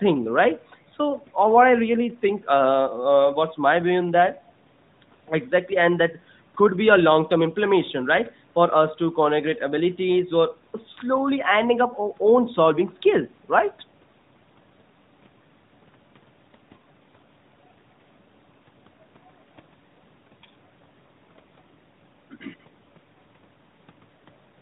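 No faults can be heard in this speech recording, which carries the narrow 4 kHz band of the AMR narrowband mobile codec and only the light coding texture expected of its highest-quality mode, around 12.2 kbps.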